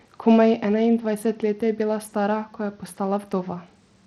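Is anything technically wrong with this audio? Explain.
Yes. Throughout the speech the treble is unstable and a gritty haze sits on the sound, most likely from Bluetooth SBC compression at a low bit allocation, consistent with roughly 80 kbps. SBC splits the signal into a few wide sub-bands and allocates bits without a hearing model, so the upper bands get starved and the rest are quantised coarsely. On a spectrogram the top bands blink on and off in blocky patches, with grainy noise and aliasing smeared between harmonics.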